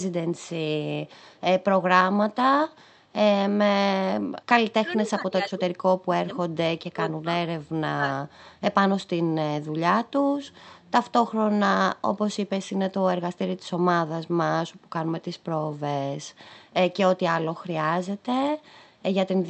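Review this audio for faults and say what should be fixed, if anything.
An echo leak appears from 1.09 to 1.41 s. A very faint copy of the speech returns about half a second late. The likely cause is a far-end echo canceller missing part of its loudspeaker signal. Better echo cancellation or a headset would prevent it.

Speech suppressed in double talk occurs at 4.8 to 5.63 s, 6.0 to 6.37 s, 6.91 to 7.26 s and 7.96 to 8.04 s. The talker drops by roughly 20 to 25 dB in pieces. The echo canceller likely cannot separate this voice from the returning echo, so it turns both down. Improving double-talk handling in the echo canceller would prevent it.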